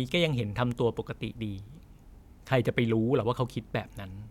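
No technical faults are audible.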